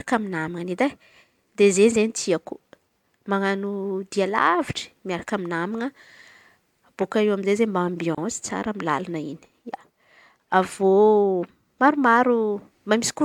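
At 8.15 to 8.18 s the speech drops out for about 28 ms: a gap at a join of encoded pieces. Two separately encoded chunks were stitched without trimming encoder delay and padding, so a short hole with smeared edges opens before the sound resumes.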